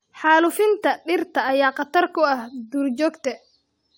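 No technical faults can be heard anywhere in this speech clip.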